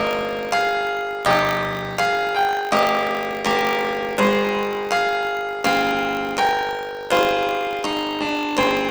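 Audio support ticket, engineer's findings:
Planar audio read as interleaved, throughout. Robotic 50 Hz buzz, no clear octave shift. Deinterleave stage reading planar 20 ms blocks as alternating pairs; each block plays twice at double speed, left half then right, so pace holds.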